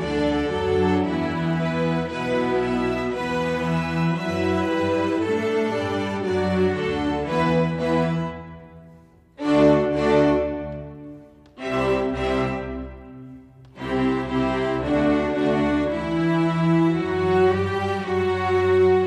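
The signal holds steady the whole way, with no audible technical fault at any point.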